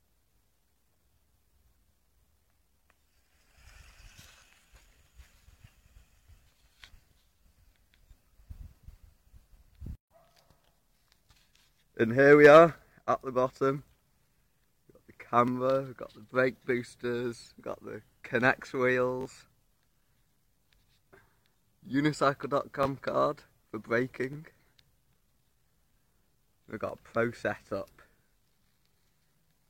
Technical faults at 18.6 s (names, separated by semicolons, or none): none